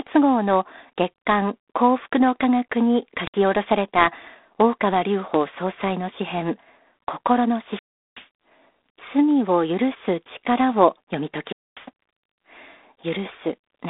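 From the start the speech has that narrow phone-line feel, sitting roughly between 250 Hz and 3.6 kHz with nothing above 3.8 kHz, and a harsh, rasping hiss that rises and falls with the level. That's G.726 ADPCM, coding each sample as a few bits of difference from a running prediction. The graininess here fits the 24 kbit/s mode, where those few bits can't track the waveform closely, so the error rides along as hiss.

Then there are two wireless microphone squelch dropouts, where the radio link fades far enough that the receiver's squelch mutes the output. The first, from 3.22 to 3.36 s, is short: a lift of hiss, a hole of about 63 ms, then the speech comes back. The second, from 11.45 to 11.82 s, is the same thing, but the silent gap stretches to about 245 ms.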